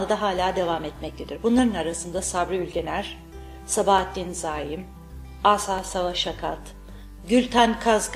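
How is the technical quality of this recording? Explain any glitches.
Clock drift buffer slips occur every 0.6 s from 0.39 s to 7.58 s, roughly fifteen times. Two devices likely run on separate clocks several hundred parts per million apart, so the buffer between them drifts until a small block of samples is dropped or repeated, causing a steady, regular click.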